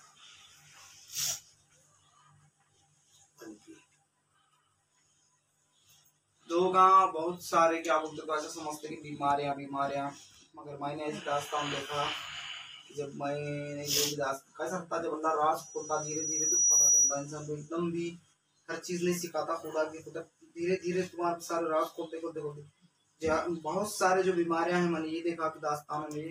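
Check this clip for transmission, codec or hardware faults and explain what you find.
One hardware fault is present: loudspeaker feedback squeal from 15.58 to 17.32 s. A mic is picking up its own loudspeaker, and at 5.8 kHz the loop gain passes unity, so that tone swells over about a second into a piercing whistle roughly 10 dB above the programme.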